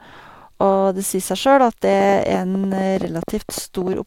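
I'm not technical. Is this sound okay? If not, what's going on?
No. From 1.93 to 3.94 s there is a train of clicks: about twenty uneven ticks, roughly ten a second. Likely electrical interference or a faulty connection or power supply.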